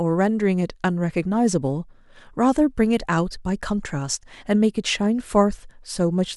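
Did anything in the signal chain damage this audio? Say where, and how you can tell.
No, nothing in the signal chain damaged this audio.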